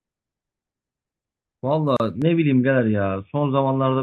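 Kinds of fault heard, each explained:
Gap at a join of encoded pieces: untrimmed encoder delay and padding between separately encoded segments leave a 34 ms silence at 1.97 s, edges smeared.
Input switched to a poorer device: at 2.22 s the sound abruptly dulls, losing everything above 3.6 kHz and shifting about 5 dB, likely a microphone change.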